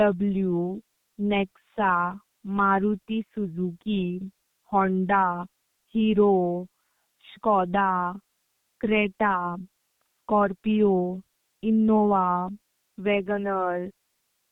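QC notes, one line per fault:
Throughout, G.723.1 codec. Nothing above 3.8 kHz. The speech sounds muffled and hoarse with smeared consonants, consistent with coding at about 6 kbit/s.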